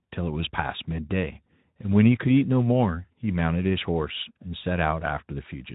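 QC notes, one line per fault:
No faults found in this speech clip.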